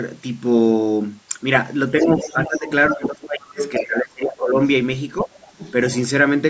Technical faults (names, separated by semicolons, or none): other side's voice leaking through; speech suppressed in double talk